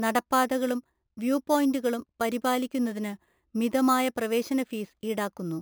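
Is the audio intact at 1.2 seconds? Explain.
No. At 1.2 seconds, as throughout the speech, there is imaging from sample-and-hold upsampling. Each sample appears to have been repeated without a smoothing filter, which fits a step from about 11 kHz up to 44.1 kHz. This leaves a mirrored copy of the spectrum around 5.5 to 11 kHz, about 19 dB below the signal, heard as a metallic fizz that tracks the speech. A spectrogram shows the harmonics reflected above 5.5 kHz, sloping opposite to the pitch. The waveform looks like a staircase.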